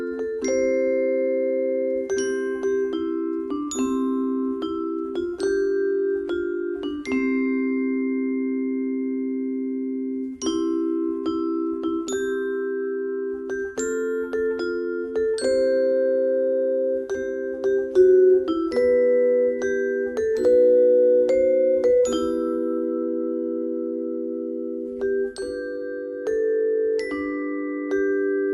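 Nothing in the recording stood out as a problem on listening.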